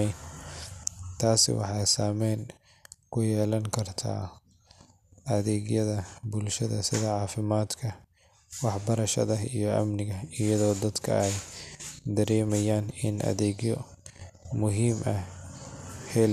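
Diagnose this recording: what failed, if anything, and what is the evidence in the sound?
Nothing in the speech points to a failure at any stage from capture through playback, so there is no fault to diagnose.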